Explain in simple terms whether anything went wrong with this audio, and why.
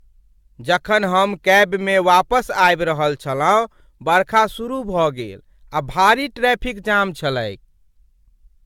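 Two things went wrong here. Across the whole clip the speech sounds a bit swirly and hollow, the crisp edges of consonants are smeared, and the very top of the treble is gone. That's generation loss, and it's likely from the audio being squeezed through the same kind of lossy compression around five times in a row. Each round throws away a little more detail and adds a little more murk, so the damage stacks up.

Then, from about 4.16 to 4.40 s, there's a short burst of harsh crackle on the loudest part. That's hard clipping. The sound got a bit too loud for one stage of the chain to handle, so the tops of the waveform were sliced flat. Those flattened peaks add a crackly edge you can hear for that quarter of a second.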